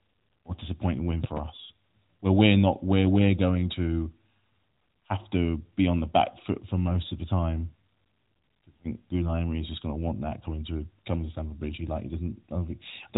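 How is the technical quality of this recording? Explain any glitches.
One glitch stands out, heard through an AMR narrowband mobile codec path that passes nothing above 3.8 kHz, with light codec damage. Loud pop, 1.24 to 1.40 s, just after "or a disappointing win" and before "us where we're not": two sharp pulses about 10 dB above the speech, likely a voltage spike from a switch, plug or static. The circuitry after it shapes each spike into a thump, while the speech continues underneath.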